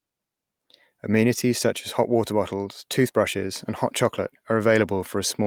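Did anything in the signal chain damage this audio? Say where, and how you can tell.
No, nothing in the chain from capture through to playback has left any audible mark on this recording.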